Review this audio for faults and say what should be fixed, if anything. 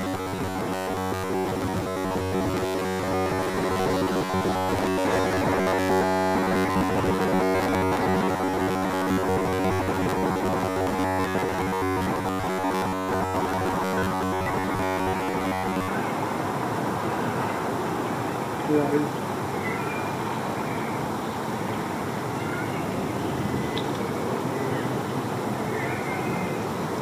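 From 0.01 to 15.88 s, audio likely arrived too seldom, so the last stretch, about 10.7 ms, kept repeating, producing robotic sound from repeated short buffers: a rigid, metallic 93.8 Hz buzz.

A larger jitter buffer and steady, on-time delivery of audio to playback would prevent it.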